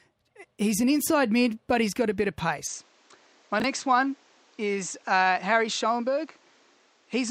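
A speech clip. From 2.67 s, right after "got a bit of", the sound turns duller and stays that way to the end. Nothing above 8.3 kHz remains, and a faint new noise floor sits well below the speech. There is no gap and no real level jump. The likely cause is an input switched to a poorer device. At 3.60 to 3.64 s there is a brief jumbled blip. These are chunks out of order: one 20 ms chunk played a chunk late, swapped with its neighbour. That leaves three hard joins.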